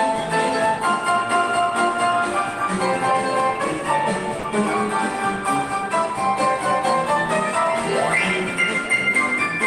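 At 4.39 s to 4.43 s the audio briefly drops out. For about 40 ms the sound gives way to a short stretch of flat, featureless fill before resuming, heard as a tiny hole in the audio. The fault is sound dropped by the voice detector, likely from the sender's discontinuous transmission (as in Opus DTX) misjudging that moment as background and pausing transmission, so the receiver substituted comfort fill until the detector triggered again.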